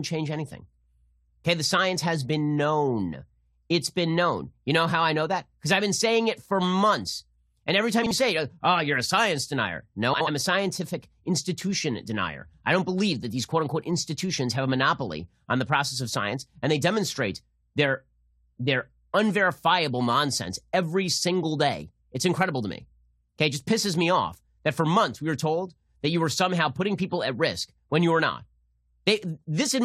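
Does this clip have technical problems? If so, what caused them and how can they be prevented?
Yes. Two bursts of frames out of order occur in the speech: 8.03 to 8.11 s, between "every time" and "say oh you're a", and 10.13 to 10.28 s, between "you're a science denier" and "a scientific institution denier". Each time, two neighbouring runs of frames were decoded in swapped order. This gives a garbled flutter, and its length fits runs of two and three frames. Reordering packets by sequence number in a jitter buffer before decoding prevents this.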